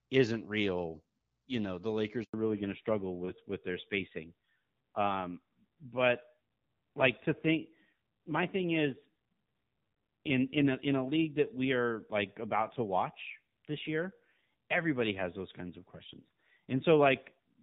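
At 2.24 s the speech cuts out for 100 ms, until 2.34 s. This is a handover gap: while the call moved between networks, no speech frames arrived, so the sound fades within a few tens of milliseconds and stays silent until the new link carries audio again. Unlike a packet-loss dropout, there is no filled-in or smeared sound bridging the hole, and what follows does not match what came before.

From 2.34 s to the end, the call falls back to narrowband. Before the gap, the sound has the light coding of HD Voice, which fits AMR-WB at 12.65 kbit/s. Afterwards nothing remains above 4 kHz, so sibilants lose their hiss, the sound turns duller, and a rougher, buzzier texture appears, which fits AMR-NB at 7.4 kbit/s. A simple low-pass filter would only muffle the sound. Here the change in texture comes together with the gap and persists from that moment on.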